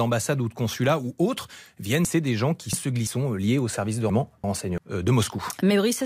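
Speech with chunks out of order at 2.05–3.07 s, after "consulat ou autres viennent" and before "sont euh liés au", and at 4.10–4.78 s, after "liés au services de". Blocks of about 341 ms play one or two positions late, giving jumbled syllables.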